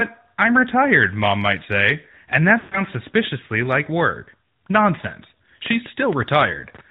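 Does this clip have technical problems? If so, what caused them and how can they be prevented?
Yes. The whole clip passes through the AMR narrowband mobile codec. Nothing above 4 kHz survives, so the speech sounds muffled and thin. The codec rebuilds the voice from a vocal tract model and a few pulses per frame. That leaves a plainly audible buzzy, synthetic edge. The damage fits a mid-rate mode near 10 kbps. To prevent it, carry the call over a wideband codec such as AMR-WB or EVS, or record locally.

Lost AMR speech frames break the audio from 2.60 to 2.82 s. This falls between "might say and that" and "suspiciously like work". About 120 ms of audio is missing, which fits six 20 ms frames. The decoder repeats the last good pitch and vocal tract settings with falling gain. So the sound stretches out and fades to silence. The voice then comes back rough for a moment. To prevent it, improve radio coverage or use stronger error protection.

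A train of clicks runs from 5.66 to 6.80 s. There are about seven clicks, roughly 6.2 per second, at an uneven pace. They have much the same shape and stand well above the speech. They sound like ticking over the sound, including in the gaps. Likely cause: interference from nearby equipment or a faulty connection or power supply. To prevent it, move phones and other equipment away from the cabling and check the connections and power supply.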